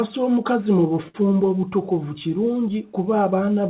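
At 1.08 to 1.24 s, a short stall from a late packet stretches the speech by 61 ms into a held sound, visible as repeating waveform cycles and smeared harmonics below 4 kHz.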